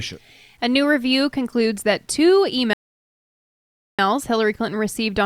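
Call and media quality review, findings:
Grainy distortion throughout the speech, tracking the signal and worst in quiet passages and decays; error sits roughly 45 dB below the signal. Likely low bit depth without dither: rounding to about 10 bits, no dither to decorrelate the error.

Rebuffering stall, 2.73 s to 3.99 s: playback drops to silence, then resumes exactly where it stopped, with no content lost and about 1.25 s added. Probable component is the player buffer, which ran dry and waited for more downloaded audio.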